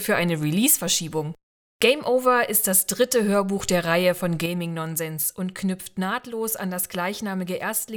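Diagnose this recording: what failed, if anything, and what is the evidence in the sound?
At 4.46 s the level falls by about 6 dB in a single step and stays down to the end. The background noise drops with it, which marks a sudden gain jump rather than a fade or automatic gain control. Likely cause: an unramped digital gain change, such as a one-bit shift.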